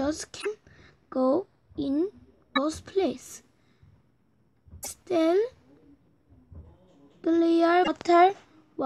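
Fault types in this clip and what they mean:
Damaged data in a compressed stream: four short glitches under 0.1 s each, where corrupt frames make the decoder lose sync.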